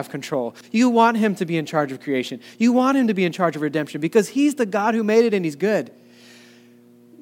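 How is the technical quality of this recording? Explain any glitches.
No glitches or technical faults can be heard here.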